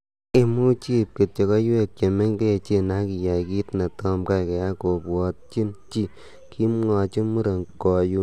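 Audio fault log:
Nothing to log here; the speech comes through with no faults to note.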